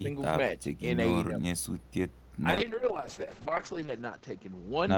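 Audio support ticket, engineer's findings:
Speech suppressed in double talk, 0.00 to 0.09 s and 0.61 to 0.68 s. Brief level dips, about 10 dB then about 5 dB. Likely echo canceller. It mistook near-end speech for loudspeaker echo during overlap and attenuated both.

Call bitrate drop, 2.52 s to end. Sound turns coarse and muffled. Bandwidth narrows from 20 kHz to 8 kHz. Worst for 1.16 s. Opus encoder. The bandwidth estimate fell. The sound points to a cut from roughly 32 to 6 kbps.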